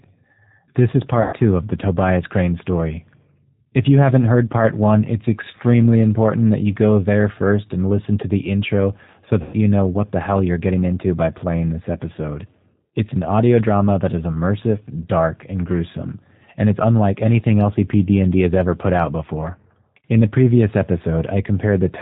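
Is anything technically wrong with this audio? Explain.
Yes. The whole recording has passed through a low-bitrate speech codec, and two stretches show packet loss being covered by that codec.

G.729 codec, throughout: the speech has been reduced to a vocal tract filter, a pitch predictor and a few pulses per 10 ms frame, and the sound fits the 8 kbit/s G.729A variant. Nothing above 4 kHz survives, so the speech is muffled, and the codec damage is plainly audible as a rough, synthetic edge on every phrase.

VoIP packet loss concealed by the speech codec, at 1.22 to 1.35 s (just before "of the") and 9.42 to 9.57 s (between "to the intro so" and "know what the hell"): packets went missing, and the decoder kept repeating its last pitch and filter while lowering the gain, over a span that fits about 110 ms of lost frames. Each gap sounds like a stretched, buzzy tone or coloured noise fading away, and the speech stays weak and smeared briefly after packets resume.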